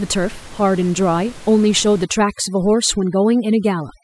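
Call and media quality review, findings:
Overdone noise removal, 2.04 s to end of clip. Background drops and breaks up into twinkling specks. Noise suppressor set too aggressive, cutting individual frequency bands near its noise estimate, removing quiet speech components too. Before onset, room noise sits about 22 dB below speech, captured acoustically, not system-generated.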